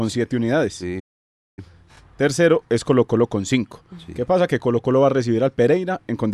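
A speech clip with a playback stall near the start. At 0.99 s the speech stops dead in mid-flow. The output stays silent until 1.59 s, a gap of about 0.58 s. Then the speech carries on. The break has no fade and no tail. It is a clean drop to nothing. The likely cause is the player running short of data, or its playback thread being blocked, so nothing reached the output until it recovered.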